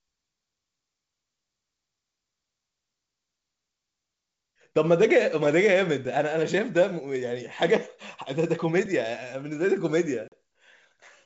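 At 10.28 s, packet loss on an ADPCM call leaves a hard-edged silent hole of about 40 ms, roughly two packets. Unlike a plain dropout, the sound then resumes slightly distorted while the decoder's predictor resynchronises.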